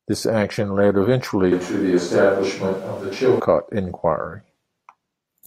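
From 1.52 s to 3.40 s the speech turns suddenly roomy and hollow, losing its bass weight, while its level stays much the same. Room noise rises to about 30 dB below the speech. At 3.40 s the close, full sound returns just as abruptly. This is likely a switch to a distant microphone: the close microphone's feed dropped out or went unused, and a mic further from the talker picked up more of the room.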